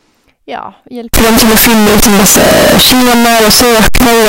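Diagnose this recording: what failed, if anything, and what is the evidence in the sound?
The failure sits at the sample-format conversion stage. From 1.14 s to the end of the speech clip at 4.28 s, the sound turns into a dense, very loud, harsh roar in which pauses and soft passages come out as loud as everything else. That points to a likely signed and unsigned mix-up on 16-bit samples: with the top bit flipped, every zero crossing jumps across the full range. Ordinary clipping or overdrive would leave the quiet gaps quiet, which is what separates the two.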